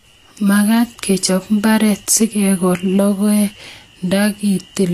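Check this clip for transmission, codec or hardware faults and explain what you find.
One codec fault runs through the whole speech recording.

Throughout, the likely cause is low-bitrate Vorbis compression, consistent with roughly 36 kbps. Nothing survives above 14.2 kHz, and the coarsely quantised treble turns into plainly audible grainy hiss with blurred consonant attacks.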